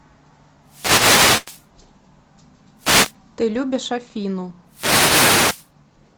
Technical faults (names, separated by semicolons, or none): wireless microphone noise hit; short stall from a late packet